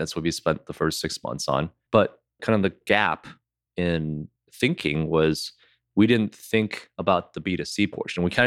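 No technical faults can be heard anywhere in the speech, and the signal stays steady and intact throughout.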